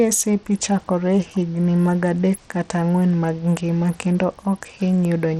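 Right through the speech the top end stops dead around 17.5 kHz, with a gritty, flickery haze over everything, likely Bluetooth SBC compression at a starved rate near 80 kbps.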